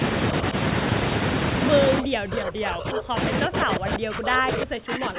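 A speech clip over a narrowband call path, with nothing above 4 kHz, which fits G.711 telephone coding. The talker drops away from 2.01 to 3.17 s and again from 3.45 s to the end, falling by roughly 40 dB. This is likely speech suppressed in double talk: the echo canceller mistook overlapping far-end speech for echo and muted both. On a waveform the envelope collapses almost to the room-noise floor, and on a spectrogram the harmonics thin out and vanish across those spans.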